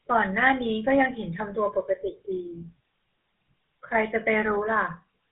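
From start to finish the speech has passed through the GSM full-rate codec, at a rate that fits a 13 kbps full-rate stream. Its crude pulse-driven excitation and hard 4 kHz ceiling leave plainly audible damage: a muffled top and a buzzy, gravelly roughness throughout.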